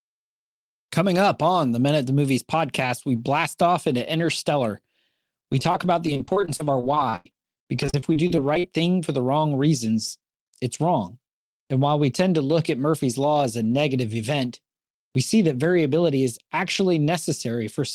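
From 5.52 to 8.67 s the speech turns choppy: repeated packet loss (robotic sound). Dozens of short holes, the longest about 93 ms, are each patched by extending the last sound, concealing about a fifth of the stretch. This differs from a single dropout through its rapid recurrence.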